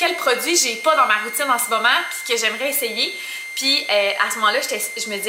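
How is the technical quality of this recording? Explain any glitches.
The recording is compromised by a constant high-pitched whistle that runs under the audio from start to finish.

A switching supply whistle is present throughout, wandering between about 2.08 and 2.14 kHz and sitting roughly 10 dB below the main signal. A nearby switching power supply is running in an audible burst mode or beating against another supply, and its cycling leaks into the audio path as a high whistling tone. On a spectrogram it appears as a narrow horizontal line near 2.1 kHz that shifts slightly within that band.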